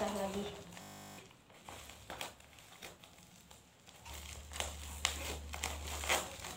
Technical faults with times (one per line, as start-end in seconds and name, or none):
0.82-1.18 system hang loop